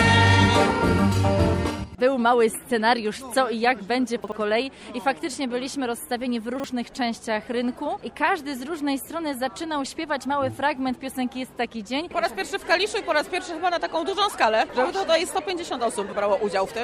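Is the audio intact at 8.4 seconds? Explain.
Yes, at 8.4 seconds the audio is intact, with no dropout, click, distortion or other fault to be heard.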